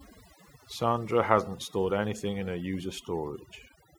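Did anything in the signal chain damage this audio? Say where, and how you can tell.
Yes: overdone noise removal at the call-processing stage, throughout. Pauses drop to near silence with twinkling specks; a spectrogram shows isolated bins blinking on and off.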